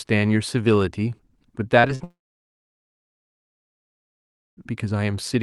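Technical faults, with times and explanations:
1.79–1.86 s and 1.88–1.91 s: short concealed packet loss. Brief gaps were filled by continuing the last sound. Each gap is heard as a quick smear or wobble.
1.95–2.02 s: burst of packet loss. About 40 ms went missing. The receiver stretched the last sound and faded it, leaving a short held buzz or hiss.
2.04–4.59 s: long network dropout. About 2.5 seconds of audio likely never arrived. A fading fill gives way to near silence for roughly 2.4 seconds before the sound resumes further on.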